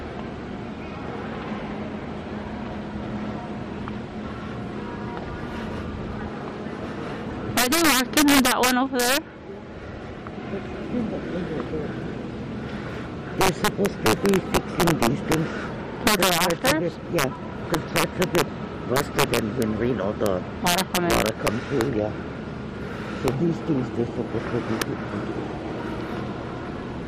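Integer overflow runs through the whole clip: with gain about 7 dB too hot, a small fraction of samples exceed the largest integer and wrap to the opposite sign, so peaks snap into violent cracks rather than the flattened, buzzy edges that ordinary clipping would give.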